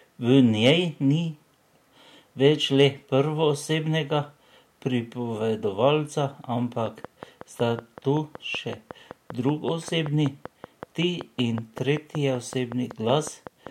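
A train of clicks runs from 6.86 to 13.68 s: some forty regular pops, 5.3 per second, peaking well above the speech, likely interference or a faulty connection.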